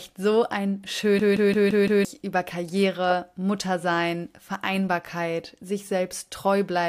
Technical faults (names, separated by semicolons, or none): system hang loop